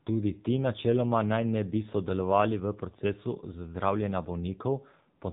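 From start to finish the speech carries AMR narrowband mobile codec damage. Nothing passes above about 3.8 kHz, and the voice has the buzzy, synthetic edge of a vocal-tract model rebuilt from a few pulses per 5 ms, plainly audible and consistent with a low rate near 7.4 kbps. Unlike simple low-pass filtering, which only dulls the sound, this coding reshapes the voice itself into a brittle, artificial timbre.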